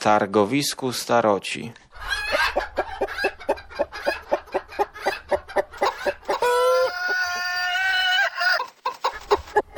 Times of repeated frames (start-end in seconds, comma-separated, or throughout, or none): 4.74-4.77